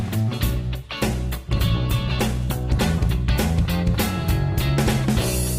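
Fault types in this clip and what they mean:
Call bitrate drop: At 1.05 s the sound turns coarse and rougher. The call's bandwidth estimate fell, so the encoder had far fewer bits to spend. It coded each frame more crudely and gave up fine detail. The degradation fits a fall from about 48 kbps to about 14 kbps. The worst stretch lasts about 2 s. At 3.09 s the bitrate recovers and the fuller sound returns.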